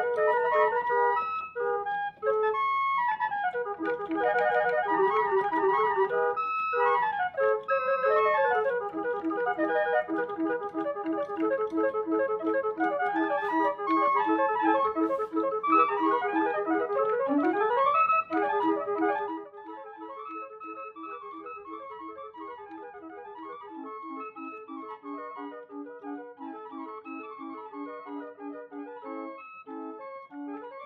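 A level drop of roughly 15 dB between 19.11 and 19.52 s is applied in coarse steps, around a hundred per second, rather than smoothly. The result is zipper noise, a fine ticking buzz riding on the sound as it fades.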